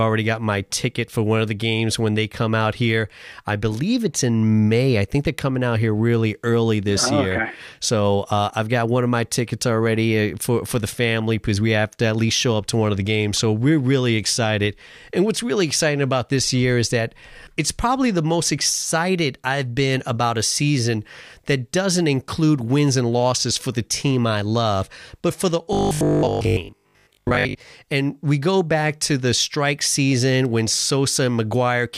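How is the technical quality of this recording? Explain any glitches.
The recording has one clear glitch, a stretch of robotic sound from repeated short buffers between 25.73 and 27.57 s, right after "love but for the". The likely cause is audio arriving too slowly, so playback kept looping the most recent fragment in place of the missing material. The loop rate produces a steady buzz at 50 Hz, which fits a 20 ms buffer, and most of that stretch is repeated fragments. The speech becomes a rigid, metallic drone that only roughly tracks its rhythm.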